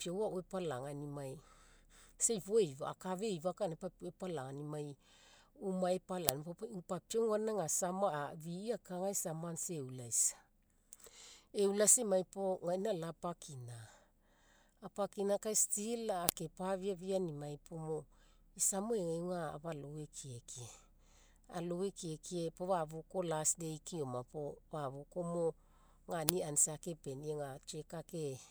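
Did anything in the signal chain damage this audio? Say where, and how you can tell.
Yes. There is a file header played as audio at 6.29 s, 16.29 s (just after "kai still") and 26.29 s: a sharp snap every 10 s regardless of the speech. At the storage stage, WAV pieces were joined with their headers intact, so those bytes play as samples.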